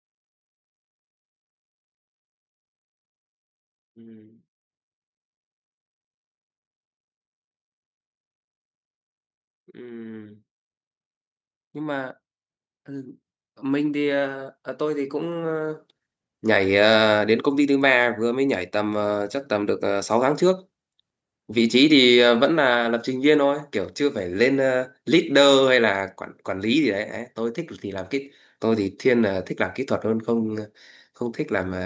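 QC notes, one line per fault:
9.76 to 19.79 s, automatic gain rising: the gain control decided the input was too quiet and slowly cranked it up by about 16 dB over those ten seconds, so the speech and the background noise swell together rather than the voice alone getting louder.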